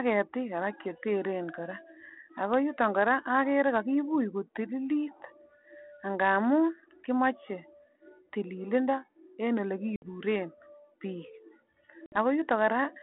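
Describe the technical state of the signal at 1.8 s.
At 1.8 s the speech is intact, carried through the G.726 ADPCM channel at 32 kbit/s with its usual telephone band of roughly 200 Hz to 3.4 kHz and no fault at that moment.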